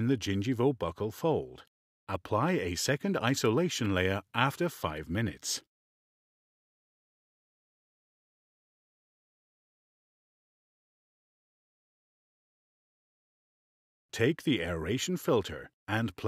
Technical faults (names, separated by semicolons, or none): none